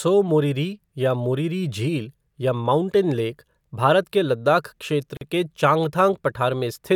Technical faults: gap at a join of encoded pieces

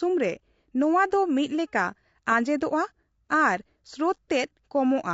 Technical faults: low-delay AAC compression

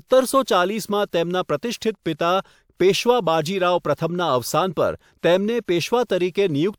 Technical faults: none

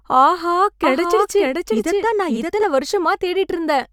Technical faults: doubled audio track

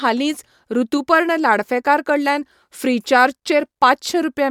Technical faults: none

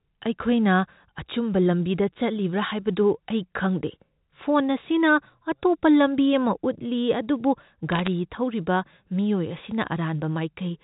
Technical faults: bit errors on a digital phone line

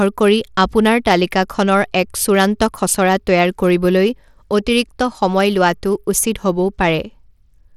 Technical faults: Bluetooth SBC compression

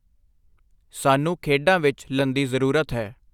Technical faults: stream segment skipped

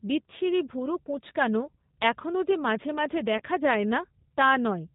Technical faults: G.729 codec; VoIP packet loss concealed by the speech codec

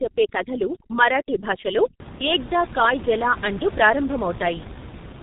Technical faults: G.723.1 codec; overdone noise removal

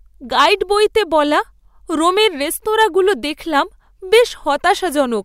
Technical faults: hard clipping

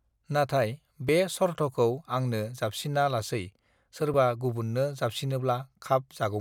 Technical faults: dropped buffer (overrun)

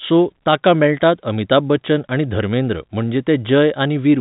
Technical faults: none

